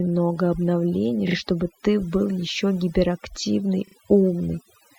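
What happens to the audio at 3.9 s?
Between 3.87 and 3.95 s the speech stutters: a tiny fragment replays. These are repeated frames: the decoder played a short run of compressed data again, consistent with 40 ms frames, adding about 80 ms to the timing.

Underneath, as across the whole clip, the background sits at near silence with twinkling specks. That is overdone noise removal: bands near the noise estimate were pushed far down, taking quiet speech detail with them.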